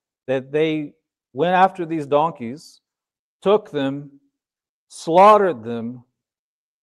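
There are no technical faults to describe in time order, and the speech comes through a call path that is working normally.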